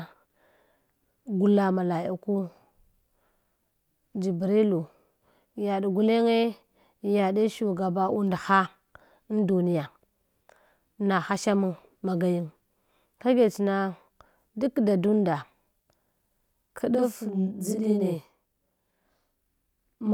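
From 16.95 s to the end at 20.14 s, the speech picks up a channel delay (doubling): one channel runs about 43 ms behind the other, which fits a 2048-sample buffer, and the two are summed to mono. The late copy arrives at equal level, so each syllable sounds doubled, like a tight slap echo. A waveform shows every onset repeated 43 ms later, and a spectrogram shows evenly spaced comb-filter notches about 23 Hz apart.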